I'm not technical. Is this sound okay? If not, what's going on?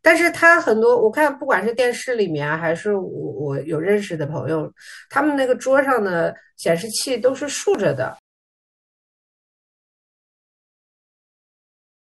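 No. At 1.79, 4.77 and 7.75 s, about 3 s apart, tiny bits of the speech vanish. That's audio missing between chunks, likely a recorder dropping about a fiftieth of a second at each handover. From 6.97 s to the end the speech turns grainy and gritty, especially in quieter moments. That's low bit depth without dither, which points to something like 9-bit audio, likely rounded crudely.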